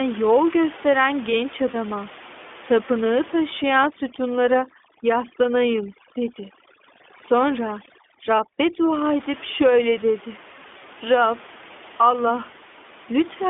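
Speech, coded throughout with the iLBC codec: the sound is band-limited to roughly 250 Hz to 3.5 kHz and has a plainly audible rough, slightly synthetic edge. That quality fits the 15.2 kbps mode with 20 ms frames. On a spectrogram, everything above 3.5 kHz is empty and the low end is thin. At 1.72 to 1.76 s, just after "gösteren genç", lost iLBC frames cause a brief buzzy, held-vowel smear of about 20 ms, consistent with a single missing frame. The decoder fills the gap by repeating the last pitch cycle with added noise, and the speech recovers immediately. A spectrogram would show a short stretch of flat, repeated harmonics there. From 3.63 to 8.93 s, ending just before "edip şöyle dedi", overdone noise removal strips away quiet parts of the voice along with the noise. The room noise, which elsewhere sits about 19 dB below the speech, drops and breaks up into twinkling specks. A spectrogram would show a patchy, blotchy background full of isolated bright dots, with faint speech harmonics eaten away.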